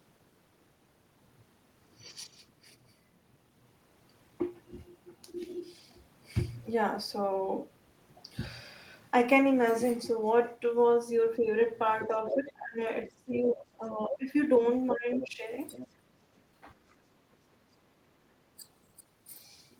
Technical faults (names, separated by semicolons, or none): speech suppressed in double talk; other side's voice leaking through; background gated by the echo canceller